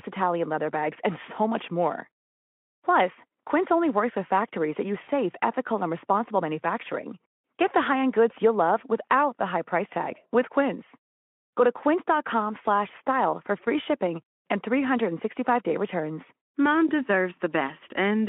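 At 5.03 to 5.09 s the speech smears into a short, fading buzz or coloured noise: VoIP packet loss concealed by the speech codec. About 40 ms went missing, which fits two lost Speex frames, and the decoder extended its last pitch and filter at falling gain. A plain dropout would leave a silent hole instead.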